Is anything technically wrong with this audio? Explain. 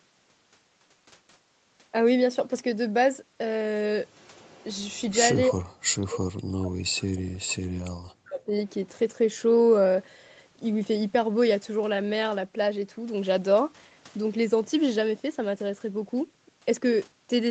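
Yes. From 5.48 to 8.54 s the speech is pushed down by as much as around 40 dB over about three seconds, in a way that matches speech suppressed in double talk. The echo canceller likely could not separate this talker from loudspeaker echo while the far side was also talking, so it attenuated both. The voice dips, thins and breaks into fragments. On a waveform the envelope collapses in uneven chunks, and a spectrogram shows the harmonics fading or vanishing in patches. The band stops at 8 kHz, which fits an Opus call path.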